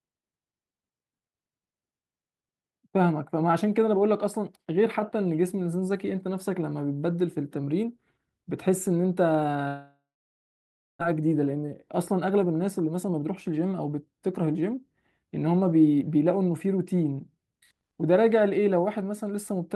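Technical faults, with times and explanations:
9.67–11.03 s, long network dropout: The sound smears into a fading buzz, then nearly a second of silence. About one second never returns, likely lost packets.
11.57–14.94 s, jitter buffer speed-up: The receiver trims tiny pitch-period slices to shed backlog. The audio runs at 109% speed, same pitch, sounding hurried, dropping roughly 0.3 s.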